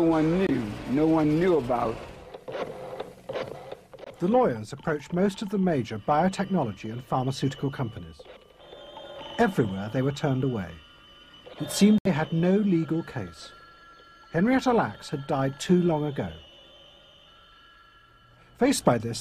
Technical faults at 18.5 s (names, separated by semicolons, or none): none